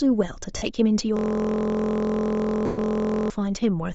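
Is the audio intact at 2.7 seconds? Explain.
No, 2.7 s falls inside two overlapping faults, on top of coding damage that runs through the whole clip.

The bigger one is a system hang loop lasting from about 1.17 s to 3.30 s. The machine or its audio driver stalled while the sound hardware kept replaying the same stretch of its ring buffer. That stretch is just 23.22 ms long, which fits a 1024-sample buffer, so instead of speech you get a steady buzz repeating at about 43.1 Hz, the same tiny fragment cycling over and over.

Right around 2.7 s there's also a run of lost LE Audio frames, from about 2.66 s to 2.78 s, so 120 ms gone, which points to twelve 10 ms frames missing. The LC3 decoder covered the gap by reusing the last spectrum it had with randomised signs and fading it after the first few frames. So in that window the buzz smears into a noisy, washed-out patch that sinks toward silence before normal decoding picks back up.

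Underneath all of it the clip has a breathy, grainy edge. That's likely LC3 compression at a low bitrate, around 32 kbps with 10 ms frames, where much of the upper spectrum gets zeroed and filled with noise. Here the damage is plainly audible, even apart from the loop and the dropout.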